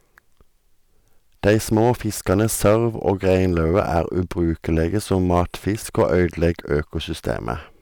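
From 1.46 to 1.92 s and again from 2.30 to 4.00 s, the speech shows hard clipping, driven about 6 dB past the level the stage can pass, so the waveform peaks are sheared flat and a harsh fuzz rides on the louder syllables. The same flattening returns from 4.80 to 5.42 s and 5.98 to 6.74 s at about 4 dB of overload, where the added high harmonics give a slightly lighter crackle on peaks.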